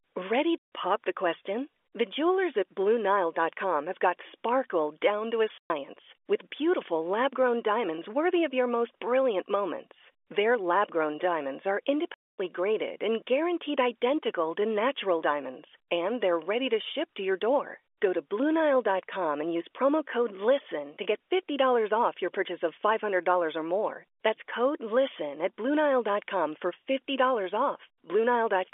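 Packet loss filled with silence at 0.58 s, 5.58 s after "sparkle down to a", and 12.14 s after "lab grown diamonds are" leaves 140, 120 and 240 ms holes. These are multiples of what sound like 20 ms packets, with hard edges rather than smeared concealment.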